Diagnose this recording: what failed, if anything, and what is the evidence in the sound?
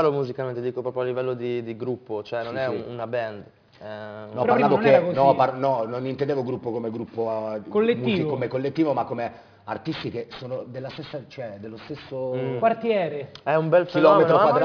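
Aliasing runs throughout the recording, introduced at sample-rate conversion. Content above about 5.5 kHz folds back as gritty, metallic tones unrelated to the source, roughly 25 dB under it. This points to a drop from 48 kHz to around 11 kHz without anti-alias filtering.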